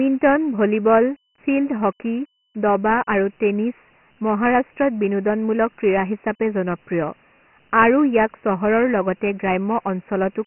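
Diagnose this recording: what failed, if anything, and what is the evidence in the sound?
The fault sits at the codec stage: the whole clip has been through Dialogic VOX ADPCM, the 4-bit OKI format used for phone menus and voicemail. A gritty hiss rides on the speech throughout and rises and falls with it. A spectrogram shows nothing below about 150 Hz and a hard ceiling at 3 kHz. That ceiling points to a 6,000-sample-per-second rate, consistent with 24 kbps. The waveform envelope carries a rough, speech-following noise floor from the coarse quantiser.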